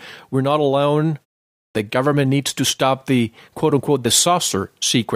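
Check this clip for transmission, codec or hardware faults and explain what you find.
One hardware-type fault stands out: a clipped start after a pause at 1.52 to 1.75 s. After "we're not alone" and a 0.35 s gap, the output path drops into sleep and needs about 229 ms to wake and relock. That swallows the onset, so "the government needs to" bursts abruptly out of silence, missing its first sounds.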